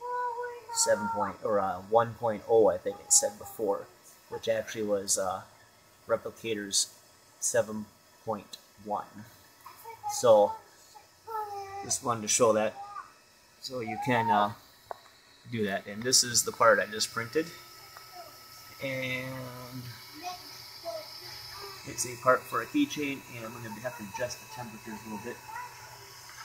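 No technical faults can be heard anywhere in this audio. Nothing in the sound points to a problem that needs tracing back to how it was captured or delivered.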